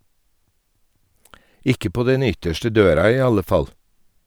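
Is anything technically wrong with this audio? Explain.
No, nothing is technically wrong with this audio.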